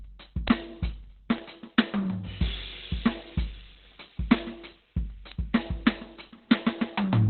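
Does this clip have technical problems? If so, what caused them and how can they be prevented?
Yes. Throughout the music, the sound is muffled and hoarse, with heavy codec damage and nothing above 4.3 kHz; a spectrogram shows a flat ceiling there. This is likely Opus compression falling back to its narrowband speech (SILK) mode, which fits a bitrate around 12 kbps. Encoding music at a much higher Opus bitrate keeps the encoder in its full-band music mode.

Sharp isolated ticks at 0.48, 1.38, 2.80 and 5.32 s are bit error spikes. A flipped bit throws a sample's value off by a power of two before it snaps back, drawn as a lone needle on the waveform and a thin full-height vertical line on a spectrogram. The last one spans two adjacent samples. Checksummed transfers and reliable memory and digital links prevent these flips.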